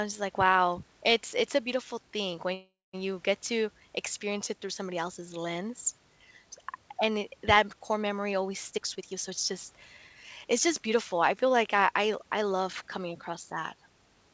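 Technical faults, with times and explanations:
2.54–2.95 s, call audio freeze: the sound stalls for about 0.4 s, the last bit smearing into a fading buzz before about 200 ms of silence. Likely delayed packets draining the jitter buffer. Then it picks up right where it stopped, with nothing lost and just a gap added.
8.71–12.25 s, jitter buffer speed-up: this stretch runs at about 111% speed with the pitch unchanged, so it sounds a bit hurried. The buffer was overfull and trimmed tiny pitch-period slices over and over, about 0.4 s altogether, to bring the delay back down.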